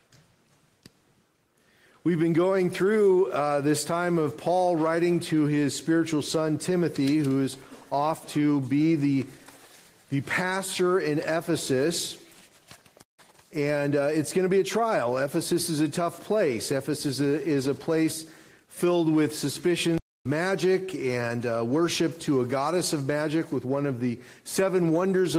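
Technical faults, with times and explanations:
13.03–13.19 s and 19.98–20.25 s, playback stall: the player likely starved of buffered data or had its output thread held up, so nothing reached the output for about 157 ms and then about 277 ms. The sound cuts to silence abruptly in mid-flow rather than fading, leaves a clear gap, and then resumes once the player recovers. The second gap is noticeably longer than the first.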